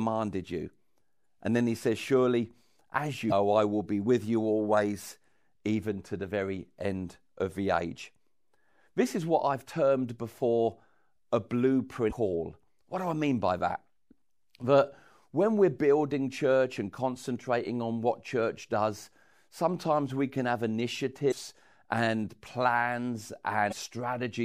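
Brief glitches cut into the speech at 1.22, 3.28 (just before "I will be with"), 12.08, 21.28 and 23.68 seconds, each lasting 26 to 46 ms. They come from damaged data in the compressed stream: the decoder misreads corrupted frames, loses sync and skips ahead to the next frame header.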